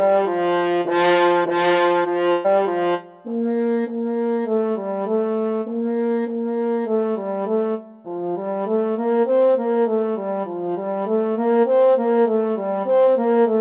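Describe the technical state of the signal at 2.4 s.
At 2.4 s the signal sits inside a burst of packet loss running from 2.32 to 2.47 s. About 120 ms of audio never arrived, so the receiver stretched the last sound into a fading buzz or hiss before resuming further on. On a spectrogram, already capped at 4 kHz by the call codec, this shows as frozen, smeared bands; the waveform shows a decaying, repetitive envelope.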